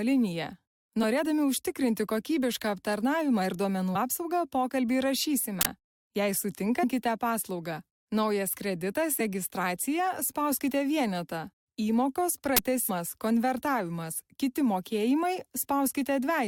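Two loud cracks or bursts of digital noise mark an uninitialised buffer, where stale memory was played out as samples: 5.61 to 5.65 s, about 43 ms, which fits a 2048-sample buffer, and 12.57 to 12.59 s, about 21 ms, fitting a 1024-sample buffer. Each shows as a dense block in the waveform and a broadband bright slab on a spectrogram. At 6.83 s, damaged data in a compressed stream makes the decoder misread a frame, giving a brief blip that appears as a thin vertical smear across frequencies.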